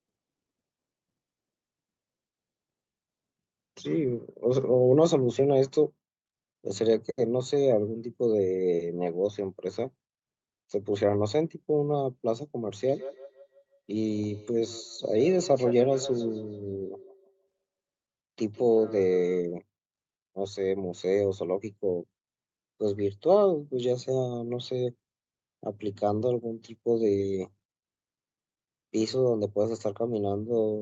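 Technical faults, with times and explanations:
12.86–19.46 s, feedback echo between two devices: speech returns roughly every 150 ms, thinner and ringing, at about -15 dB, as a second device replays and re-captures it.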